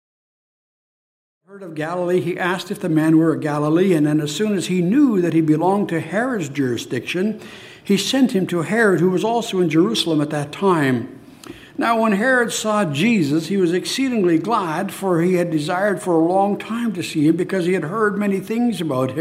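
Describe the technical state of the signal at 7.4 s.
At 7.4 s the signal is intact, with no audible fault.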